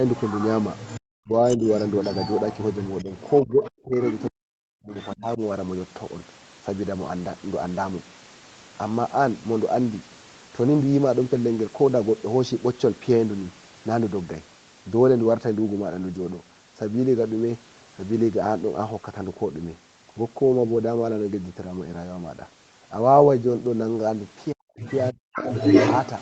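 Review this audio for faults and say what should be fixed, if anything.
Other side's voice leaking through: a second voice is audible from 0.13 to 4.28 s at about 15 dB below the main talker, briefly again from 4.98 to 5.16 s at about 20 dB down, and from 24.8 s to the end at roughly the same level as the talker. This is likely loudspeaker playback reaching the microphone that the echo canceller failed to fully subtract. Prevent it by improving echo-path estimation or adding stronger residual echo suppression.

Speech suppressed in double talk: the talker's level collapses, dropping by roughly 40 dB at its deepest, from 1.18 to 1.62 s, from 3.04 to 5.41 s, and from 24.52 to 25.47 s. Each dip overlaps a stretch where the leaked voice is also present. The likely cause is the echo canceller, unable to tell near speech from far-end echo while both are active, attenuating everything. Prevent it with better double-talk detection that keeps suppression gentle when the near talker is active.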